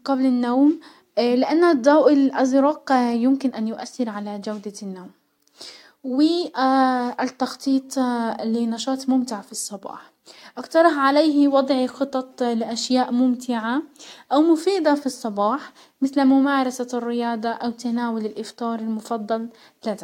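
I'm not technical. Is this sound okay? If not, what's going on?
Yes, no faults heard here.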